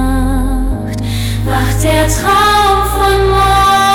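Hard clipping runs through the whole clip. The signal arrives about 8 dB hotter than the stage can pass, so the loudest peaks are cut flat. Roughly one sample in fourteen hits the ceiling. The flat tops add high harmonics, heard as a harsh crackle on every loud moment.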